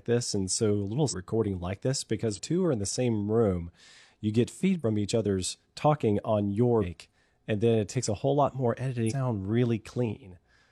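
Damaged data in a compressed stream breaks the speech at 1.07–1.14, 2.33–2.39, 4.79–4.83, 6.78–6.85 and 9.06–9.13 s: corrupted frames are misread or rejected, the decoder loses sync and hunts for the next frame header, leaving a brief 40–70 ms disruption each time.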